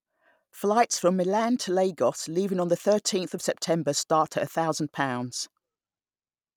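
No technical faults can be heard anywhere in this speech recording. Nothing interrupts, distorts or alters the audio at any point.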